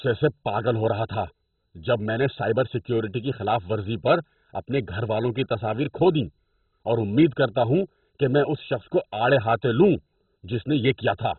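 From start to end, the speech sounds dull and gurgling, with a coarse, grainy edge. Nothing is heard above about 4.1 kHz. This is likely heavy MP2 compression at a very low bitrate, switching off upper sub-bands and crudely quantising those left.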